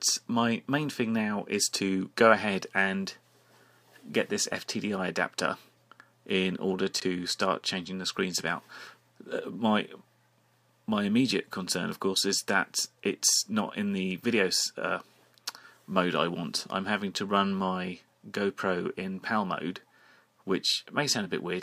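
Right around 6.94 to 7.02 s there's a short jumbled patch where chunks come out of order. One 20 ms chunk shows up about three chunks late, so it plays after the material that should follow it. Nothing actually goes missing, but the sequence gets scrambled and you get three abrupt joins in that span. To the ear it's a quick garbled stutter before things settle back.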